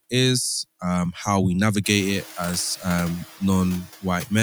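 From start to end, noise suppressor artifacts reduce the background by about 11 dB, band by band, so the residue dips between words and returns beneath them. Unlike a noise gate, it never cuts to silence. The room noise, which rises around 2 s, stays about 19 dB below the speech.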